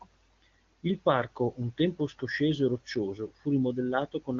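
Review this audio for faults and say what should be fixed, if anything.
Nothing in this speech needs fixing. It has passed through the AMR wideband (HD Voice) codec, and the coding damage is faint at most, which fits one of the codec's higher bitrates.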